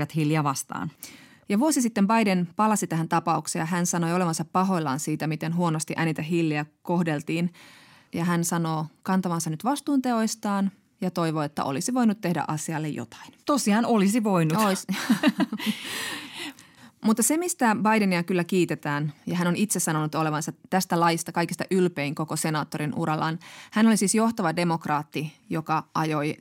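No technical faults can be heard anywhere in the recording, and the signal stays steady and intact throughout.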